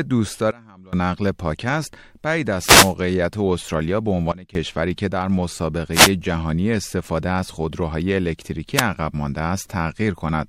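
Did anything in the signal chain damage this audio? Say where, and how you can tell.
Yes. Sudden gain jumps at 0.51–0.93 s (about −24 dB) and 4.32–4.55 s (about −17 dB): the waveform envelope steps down instantly, with speech and noise floor dropping together, likely an unramped digital gain change.

Wireless microphone noise hits on the analogue radio link at 2.59–2.94 s, 5.92–6.11 s and 8.75–8.83 s. Multipath fades let receiver hiss surge, appearing as broadband vertical smears on the spectrogram.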